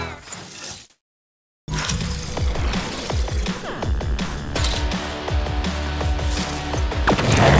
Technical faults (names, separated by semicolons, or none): comfort noise in place of the background; onset clipped by the voice detector